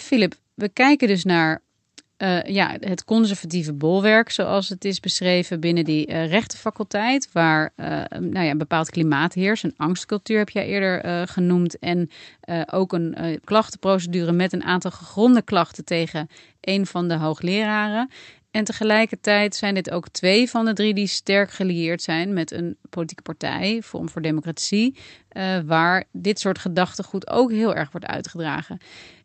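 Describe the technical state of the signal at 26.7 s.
At 26.7 s the speech is intact, with nothing breaking the signal beyond the ordinary coding of the call path it passed through.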